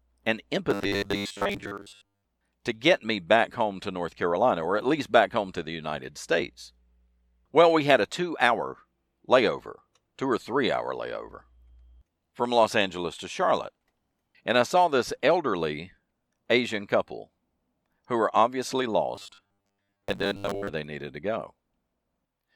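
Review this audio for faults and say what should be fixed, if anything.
Audio likely reached playback too seldom, so the software replayed the last 10 ms over and over to fill gaps while most of the real audio was skipped. That produces robotic sound from repeated short buffers, a rigid 100 Hz metallic buzz, from 0.71 to 2.25 s (before "to get me back") and from 19.15 to 20.69 s (between "who were obviously" and "they needed to go"). A larger playback buffer and steadier audio delivery would prevent it.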